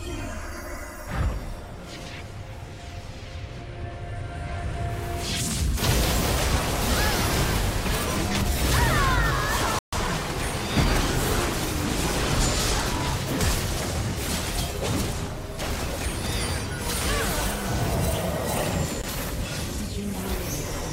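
Bluetooth stall at 9.79 s: the sound drops to silence for 138 ms, likely because delayed wireless packets left the playback buffer empty until they arrived.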